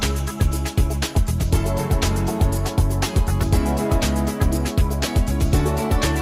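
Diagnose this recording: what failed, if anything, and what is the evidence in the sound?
Nothing in the signal chain has failed: level, continuity and timing stay steady across the whole recording, with no break, discontinuity or distortion anywhere in the audio.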